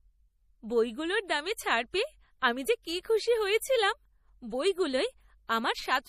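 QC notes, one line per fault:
Throughout: likely low-bitrate MP3 compression, around 40 kbps, drops weak bands frame to frame and removes everything above 15.2 kHz, so speech turns watery and swirly.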